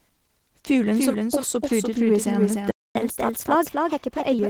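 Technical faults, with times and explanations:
throughout: doubled audio track, a second full-band copy roughly 300 ms behind and about 5 dB quieter, with no decay, likely from a slower second capture path.
throughout: Opus voice compression, audibly hoarse and slightly robotic, which points to a low bitrate near 16 kbps in hybrid mode, with speech-predictive coding below 8 kHz and coarse coding above it.
2.71–2.95 s: playback stall, the sound stops mid-flow for about 250 ms, likely because the player ran out of buffered data, then resumes where it stopped.
2.95–4.39 s: catch-up at higher speed, the backlog plays 1.15 times fast through resampling, raising pitch about 2 semitones until normal speed returns.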